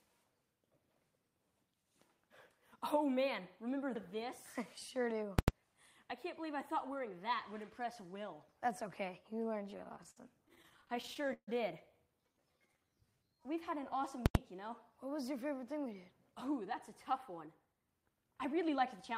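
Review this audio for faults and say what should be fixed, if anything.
Invalid numbers at full scale at 5.39 to 5.48 s and 14.26 to 14.35 s: a calculation produced invalid values, pinning each block of about 93 ms at full scale. Each is heard as a loud pop at its start and end with silence between, and the length fits a 4096-sample processing block. Prevention: check for non-finite values in the processing chain and clamp or zero them before output.

Repeated stalls (stutter) from 9.63 to 11.49 s: packets arrived late over and over, emptying the jitter buffer more than twenty times. The receiver stretched the last sound to fill about 401 ms, with the longest wait 141 ms, so the audio drags and stutters. Prevention: give the jitter buffer more headroom or fix the cause of the late delivery upstream.

Jitter buffer slow-down from 12.22 to 13.81 s: a low buffer made the receiver repeat pitch periods, adding 228 ms. 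Playback runs at 86% speed without changing pitch, so sounds are drawn out. Prevention: set the target delay so the buffer rarely runs low enough to force stretching.

Jitter buffer speed-up from 15.60 to 16.71 s at 106% and from 17.12 to 19.17 s at 108%: excess buffered audio was trimmed by cutting short pitch-period pieces. Roughly 70 ms and 150 ms are removed, so the sound is audibly hurried. Prevention: adapt the buffer target more gradually so bursts of arriving packets are absorbed without heavy compression.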